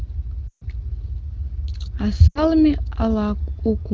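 At 0.48 to 0.64 s and again at 2.28 to 2.40 s, speech drops to near silence within two frames, then returns weak. These are lost AMR speech frames: the wideband decoder extends the last good pitch with falling gain.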